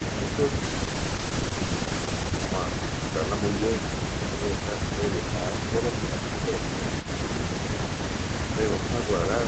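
From 0.65 to 2.53 s the speech turns rough and watery, with a smeared, grainy texture that lasts almost two seconds before the clip's normal clarity returns. This is a call bitrate drop. The call's bandwidth estimate fell, and the Opus encoder was pushed from 32 kbps down to 13 kbps. It stayed at that floor for about 1.81 s, and with so few bits each frame is coded much more coarsely.

At 7.02 s a brief, faint scrap of earlier speech surfaces for about 60 ms, lying roughly 20 dB under the live voice. It arrives about 445 ms after the original, and the likely cause is an echo leak. The far end was playing the call on a loudspeaker, and its echo canceller let a fragment of that playback, which its microphone had picked up, slip back into the call.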